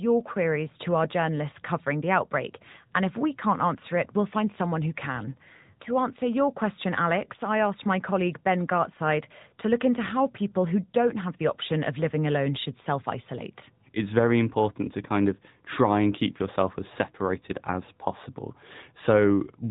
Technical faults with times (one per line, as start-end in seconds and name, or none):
0.00-19.71 AMR narrowband mobile codec